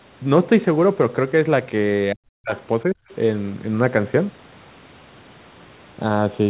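From 2.12 to 2.52 s the speech drops sharply, by roughly 40 dB at its deepest, for around 400 ms. This is speech suppressed in double talk. The likely cause is that both ends were talking at once, and the echo canceller could not tell the near talker from the loudspeaker echo, so it attenuated everything. A shorter dip of the same kind follows from 2.85 to 3.01 s, about 30 dB deep and lasting around 150 ms. In both places the talker's voice is turned down.

Right after each dip, a faint second voice leaks through: once from 2.56 to 2.60 s and again from 3.10 to 3.15 s. Each time it sits about 30 dB below the talker. This is the other side's voice leaking through. The remote party, played on the local loudspeaker, was likely not fully removed from the microphone signal by the echo canceller. It comes through only as brief scraps. These sit within the narrowband call sound, which has nothing above 4 kHz.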